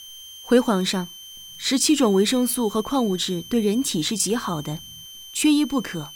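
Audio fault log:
throughout, switching supply whistle: a switching power supply is cycling at an audible rate, putting a thin high whistle under the audio, roughly 20 dB below it, with its pitch wandering between about 3.08 and 3.14 kHz as the supply's operating point shifts.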